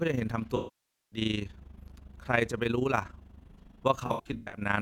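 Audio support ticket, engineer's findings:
Overlap-add ripple, whole clip. The resynthesis stage overlaps windowed frames with a mismatch that does not sum to constant gain. Level pumps about 11 dB once per frame, at around 30 Hz, giving rough tremolo flutter across all the speech.

AAC frame loss with concealment, 0.56–1.19 s. The decoder dropped 26 frames, about 0.55 s. It extrapolated the last good spectrum and then faded. Smeared, noisy patch decays toward silence, then the speech fades back in.

AAC frame loss with concealment, 4.06–4.61 s. Scattered frame drops, about 0.34 s lost over roughly 0.47 s, longest gap around 100 ms. Short concealed bursts cause intermittent phasey, smeared breaks in the speech rather than full dropout.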